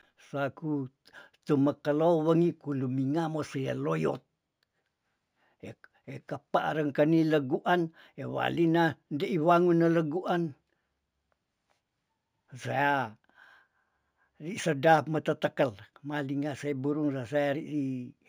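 Speech with a dull top end and a faint metallic shimmer clinging to the sibilants throughout. The fault is imaging from linear upsampling: the rate was raised by joining samples with straight lines, which fits a 16 kHz source taken to 44.1 kHz. That crude interpolation rolls off the highest speech frequencies and leaves mirrored copies of the spectrum between 8 kHz and 16 kHz, roughly 40 dB below the speech.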